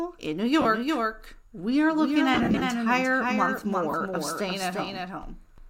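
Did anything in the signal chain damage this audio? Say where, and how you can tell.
Yes. A doubled audio track runs through the whole clip: a second full-band copy trails about 0.4 s behind, roughly 5 dB quieter. The cause is likely a slower second capture path mixed back in. Unlike echo or reverb, the copy has no decay and no room colour.

Lost LE Audio frames sit at 0.62–0.65 s, 2.34–2.62 s just after "we are looking", and 3.91–3.94 s. This damage comes from the Bluetooth link. The LC3 decoder concealed the gaps by reusing the last spectrum, which turns tones into a brief noisy smear rather than a silent dropout. The 30 ms and 22.5 ms gaps fit runs of 7.5 ms frames. The middle loss totals about 165 ms, scattered over 270 ms in short bursts.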